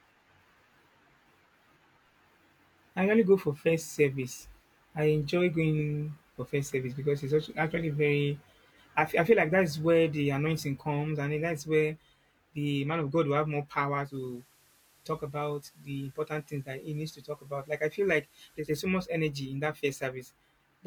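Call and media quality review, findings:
Digital radio blending to analogue, 14.02–18.70 s, after "will have more" until "so much energy in": 159 ms crossfades to FM, hiss about 35 dB down.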